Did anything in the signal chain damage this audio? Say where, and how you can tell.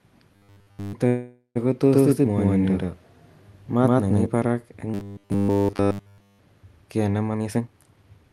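Yes, a few spots, all in the playback and call side of the chain.

First, robotic sound from repeated short buffers at 0.36–0.93 s and again at 4.94–6.39 s, just before "ka ne". Both stretches collapse into a rigid 100 Hz buzz, which fits a 10 ms chunk being looped nearly nonstop. The likely cause is a starved driver or buffer stage replaying its last block.

Then a call audio freeze from 1.07 to 1.57 s. The sound hangs on as a fading buzz for about 480 ms, the last 80 ms going silent, then picks up exactly where it left off with nothing skipped. That's likely delayed packets on the network draining the jitter buffer.

There's also a doubled audio track from 1.87 to 4.26 s. A second full-band copy, at roughly the same level, trails about a tenth of a second behind. It has no decay or room colour and cuts in and out abruptly. That most likely comes from the signal being captured twice, with one path running slower.

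Last, a jitter buffer speed-up from 7.30 to 8.31 s, right after "ka ne". The sound rushes along at 145% speed with the pitch unchanged. That's the call processing trimming pitch-period slices, roughly half a second in total, to shrink an overfull buffer.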